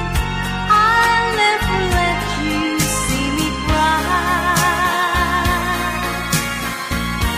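At 6.89 s an error lasting about 85 ms, ending at 6.97 s, marks a corrupt FLAC frame. Flipped bits derailed the decoder's prediction, producing garbage peaking near -23 dBFS until the next intact frame; the span suggests two damaged frames.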